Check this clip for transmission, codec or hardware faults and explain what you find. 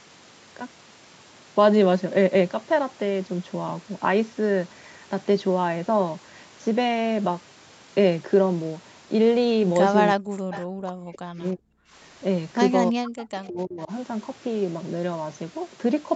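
Two faults are audible in the second half of this speech clip: speech suppressed in double talk, twice, and a brief echo leak.

From 10.14 to 11.78 s and again from 12.91 to 13.91 s, the speech dips sharply and breaks up in pieces, falling by up to about 40 dB, over roughly one and a half seconds and most of a second respectively. This is speech suppressed in double talk, likely caused by an echo canceller that couldn't separate the near talker from the far end while both spoke, so it attenuated everything.

From 10.53 to 10.60 s, inside the first suppressed stretch, a faint scrap of the speech returns about 317 ms late, roughly 20 dB below the main level. This echo leak likely comes from a loudspeaker-side echo canceller that let part of its microphone pickup through and sent it back.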